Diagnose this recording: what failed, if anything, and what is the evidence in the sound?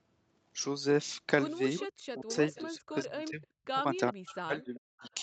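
The echo leak sits in the call processing stage. There's a faint delayed copy of the speech trailing the main signal by 390 ms, at 1.78 to 1.87 s, 2.31 to 2.62 s and 4.26 to 5.14 s. It's roughly 15 dB below the direct speech in the first two spots and around 20 dB down in the last. The likely cause is a far end on loudspeaker whose echo canceller didn't fully cancel its own mic pickup, so the residue came straight back down the line.

The speech suppressed in double talk is also a call processing problem. From 1.93 to 3.67 s and again from 4.13 to 5.04 s the speech ducks hard, with the deepest dips around 40 dB, chopping out about a second of sound in each stretch. Both windows overlap the echo bursts. That points to the echo canceller likely hearing both sides at once, failing to tell the local talker from the echo, and clamping down on everything.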